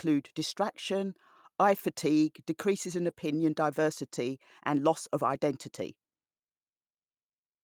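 At 3.09 s, just after "eye fatigue decreases in", and again at 5.33 s, after "diversity and loss of", a 20 ms stretch of speech turns briefly rough and noisy: a lost packet rebuilt from error correction. Each missing packet was replaced by the lower-bitrate copy carried in the next one. Unlike plain packet-loss concealment, there is no gap, smeared repetition or dropout, only a short loss of fine detail.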